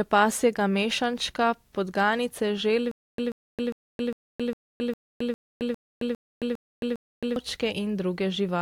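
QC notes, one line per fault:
2.91–7.36 s, stutter with silent gaps: the same 136 ms burst repeats 11 times, every 404 ms, with 269 ms of dead silence between. This is likely a stalled stream replaying its last fragment on each retry. The speech in between is lost.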